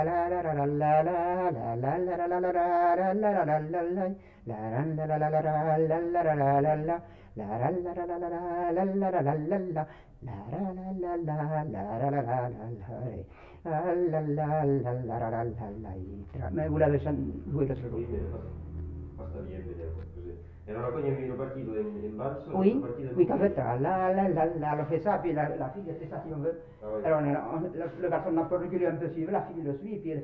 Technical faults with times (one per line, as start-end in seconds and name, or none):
none